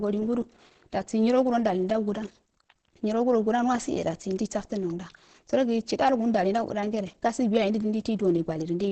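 Muffled and hoarse from start to finish, the speech has a hard ceiling, with nothing above about 8.8 kHz. The likely cause is heavy Opus compression: the dull, throaty texture fits the codec's speech-oriented SILK mode at wideband, where the encoder models the voice instead of preserving every band. The damage and narrowed bandwidth point to a bitrate of around 12 kbps, low enough that detail is sacrificed throughout.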